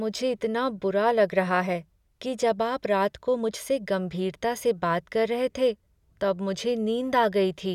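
Nothing in this speech clip jumps out as a technical problem; it just runs along without any audible glitches.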